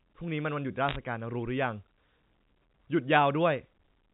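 Bit errors on a digital phone line show up in this speech recording between 0.89 and 0.96 s as a short cluster of sharp ticks and crackle over otherwise unchanged speech. On a G.711 A-law line, as here, each flipped bit alters a single 8-bit sample, and when the sign or a high-order bit is hit, that sample jumps to a wildly wrong value. An error rate of around one percent across a handful of frames fits this brief burst. The telephone coding itself shows the expected 4 kHz band limit.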